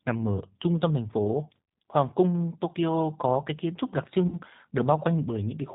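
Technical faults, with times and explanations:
Throughout: G.729 codec. The narrow band with nothing above 4 kHz, and the slightly rough, synthetic texture of the speech, fit an 8 kbit/s G.729 stream. The decoder rebuilds each 10 ms frame from a vocal tract filter, a pitch predictor and a few pulses.
1.64–1.68 s and 4.28–4.38 s: VoIP packet loss concealed by the speech codec. Each gap covers about 40 ms, which fits two lost packets. The decoder stretched its last pitch and filter into a fading buzzy tone or coloured noise, and the speech recovers only gradually afterwards.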